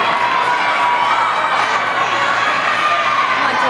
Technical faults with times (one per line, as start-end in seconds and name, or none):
none